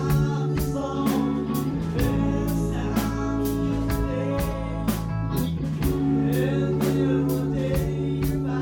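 No audible technical faults anywhere in the audio; nothing to flag.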